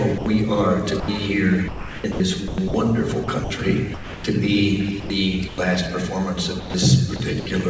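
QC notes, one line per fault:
0.18–0.26 s and 1.00–1.08 s, sound dropped by the voice detector: each time, 80 ms of sound gives way to steady, even noise and then returns. The sender's detector likely took it for background and the receiver filled in comfort noise. A spectrogram shows a flat, textureless noise patch, and the waveform sinks to a low, uniform envelope.
1.68–4.24 s, 5.00–5.58 s and 6.60–7.46 s, sound chopped by the voice detector: the detector likely toggled repeatedly here, swapping about 1 s, 200 ms and 240 ms of sound respectively for comfort noise, so the audio stutters. A spectrogram shows alternating detailed and smooth noise blocks below the 8 kHz ceiling of the call band, and the waveform shows the envelope repeatedly collapsing and recovering.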